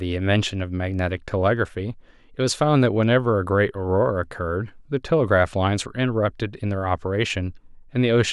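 No technical faults can be heard anywhere in this speech recording. Nothing in it calls for a timestamp or a closer look.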